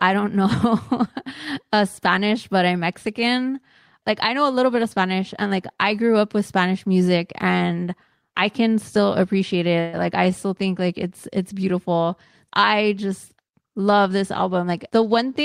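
Packets were most likely held up in transit at 9.80 s, just after "I can still appreciate", leaving the jitter buffer empty. This is a call audio freeze. For about 130 ms, until 9.96 s, the receiver stretches the last bit of sound into a fading buzzy hiss with no true silence. The speech then picks up exactly where it left off, so nothing is lost, but the rest of the clip runs about 130 ms later than before.

At 14.42 s, right after "I just love this", the jitter buffer had built up more audio than its target. The receiver cut repeated pitch-period-length slivers until 14.92 s to reduce the delay. This jitter buffer speed-up removes roughly 70 ms in total and plays that half second at about 113% speed. The pitch stays the same, but the speech sounds noticeably hurried.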